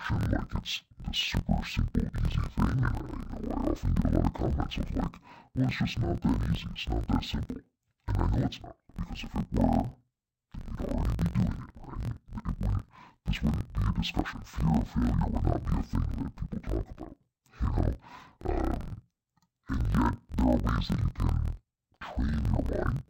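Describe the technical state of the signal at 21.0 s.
At 21.0 s you're hearing the same interleaved audio read as planar fault that runs through the whole clip. Each block, about 23.22 ms long and consistent with a 1024-sample block, carries alternating left-right samples, but the first half gets treated as left and the second half as right. Each half plays stretched to twice its length, so the speech drops an octave (12 semitones) while its overall pace holds. It comes out doubled and choppy, with a flutter at 43.1 Hz.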